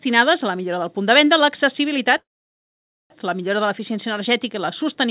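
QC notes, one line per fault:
2.18–3.12 s, call audio freeze: packets likely stalled and the jitter buffer emptied; fading tail, 0.87 s silence, then audio resumes intact, 0.92 s late.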